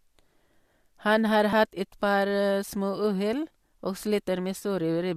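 At 1.53 s the speech skips abruptly, most likely audio missing between chunks: roughly 20 ms dropped at a chunk boundary, which fits 2-second chunks. The two sides are butted together, so the waveform shows a sudden discontinuity.

Just before "et par småuhell", at 1.76 s, a 10 ms AAC frame loss with concealment leaves a brief smeared, noisy patch. The decoder filled the gap from the previous spectrum, and the spectrogram shows harmonics blurring into noise there. From 4.58 to 4.63 s a longer 30 ms loss sounds phasey. That fits about three 10 ms frames of the low-delay AAC stream.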